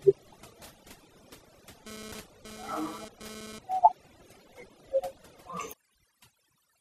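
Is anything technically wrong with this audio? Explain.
Yes, there are several problems in this speech clip.

Overdone noise removal runs throughout. Bands near the noise estimate are pushed to nothing, leaving near-silent gaps with twinkling specks. A spectrogram shows scattered isolated dots between words.

The whole clip is also dull, with a gurgling, granular roughness, most likely from MP2 compression at a low rate, around 80 kbps. A spectrogram shows upper bands flickering off and on.

From 1.87 to 3.59 s there is GSM phone buzz, a raspy 217 Hz buzz about 11 dB below the speech. It comes and goes, as a phone does during a data transfer. The spectrogram shows evenly stacked harmonic lines.

From 3.19 to 3.30 s there is DAB burbling. Bit errors corrupt a few frames, so short blips of noise land in single sub-bands and produce a brief burbling. The spectrogram shows blocky patches there.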